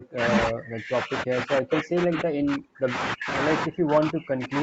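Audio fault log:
0.00–0.21 s, 0.48–2.96 s, 3.14–3.28 s, 3.65–4.62 s, speech suppressed in double talk: the speech repeatedly drops by up to about 40 dB, likely because the echo canceller could not separate this side's talker from the overlapping loudspeaker echo and turned both down. The waveform collapses to near-flat stretches, and the spectrogram shows dark gaps across all frequencies.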